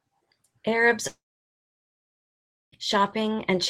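From 1.07 to 2.74 s, a fading buzz turns to silence, then speech resumes with 1.7 s skipped rather than paused: likely a long network dropout.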